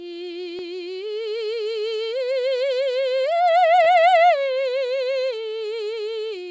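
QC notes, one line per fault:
3.84–3.87 s, short concealed packet loss: about 20 ms of the music arrives late or not at all, and the receiver extrapolates the last sound before crossfading back, giving a brief smear; the spectrogram shows a short smeared patch below the 8 kHz ceiling of the wideband call path.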